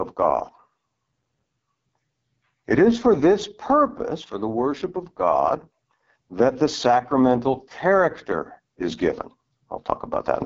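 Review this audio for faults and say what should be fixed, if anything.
The speech runs through the AMR wideband (HD Voice) codec for its whole length, and the damage is heavy. The rough, raspy texture fits the lowest AMR-WB mode, around 6.6 kbit/s, where the pulse-driven vocal tract model has too few bits to track the voice cleanly. On a spectrogram, harmonics look smeared and grainy, with nothing above 7.5 kHz. To prevent it, negotiate 12.65 kbit/s or higher on the call path.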